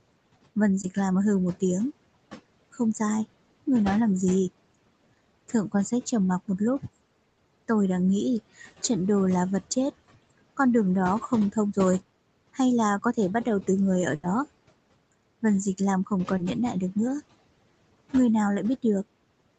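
Noise suppressor artifacts run through the whole clip. The suppressor pulls the background down by about 21 dB between phrases, and the remaining noise rises under the speech. At 0.81 to 0.85 s, a short concealed packet loss fills a missing fragment of about 20 ms by extending the preceding sound, which leaves a brief smear. A burst of packet loss at 7.29 to 7.39 s has about 80 ms of audio synthesised from the last sound and faded, heard as a held buzz or hiss before speech resumes further on. A second burst of packet loss at 14.15 to 14.25 s does the same. At 16.37 to 16.41 s, another short concealed packet loss briefly wobbles the sound where roughly 20 ms went missing.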